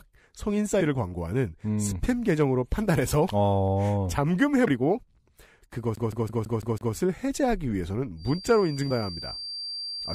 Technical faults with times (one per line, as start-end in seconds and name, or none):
0.80 compressed frames skipped
4.66 compressed frames skipped
5.95-6.95 CD stuck on one turn
8.15-10.14 feedback whistle
8.90 compressed frames skipped